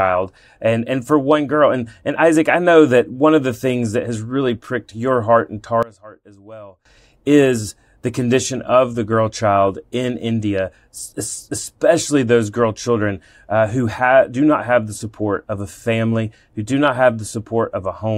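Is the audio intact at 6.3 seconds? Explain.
No, not at 6.3 seconds. Between 5.83 and 6.85 s the speech drops by about 21 dB and turns distant, like a faint ghost of itself, before snapping back. That's the signature of one channel inverted, likely a polarity flip on one side. When the two channels get summed to mono, everything centred cancels out, and what survives is just the small difference between them.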